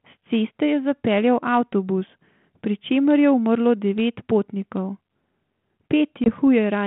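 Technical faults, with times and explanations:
6.24 to 6.29 s, packet loss on an ADPCM call: one packet's worth of sound, about 20 ms, drops out as a sharp-edged silent gap, and the speech resumes with brief roughness before settling. Because ADPCM sends only differences from an adaptive prediction, the decoder's predictor and step size no longer match the sender's after the gap, so recovery takes tens of milliseconds. A plain dropout in uncoded audio would resume cleanly, without this after-gap disturbance, over the light telephone-band G.726 coding at 32 kbit/s.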